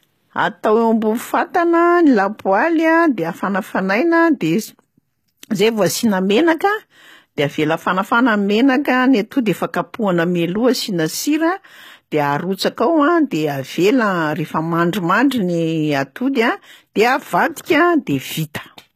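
The speech has plainly audible HE-AAC compression throughout, likely. The treble above is rebuilt from copied lower bands, nothing above 14.9 kHz, fitting roughly 20 kbps, so sibilants sound gritty. At 16.33 s there's pre-echo: a 19 ms hiss before a sharp attack, softening its edge.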